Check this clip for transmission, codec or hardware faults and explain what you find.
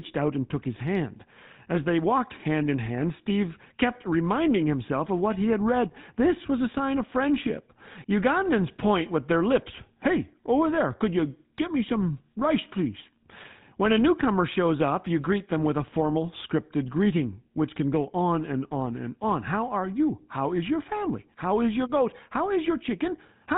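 The speech carries one fault, present from start to finish. It is GSM full-rate codec damage, and it is plainly audible. The codec models the vocal tract and drives it with a sparse, regular pulse train. Only every third excitation sample survives, which fits a 13 kbps full-rate stream. Nothing above 4 kHz gets through. The result is a muffled, buzzy, gravelly roughness over the whole clip.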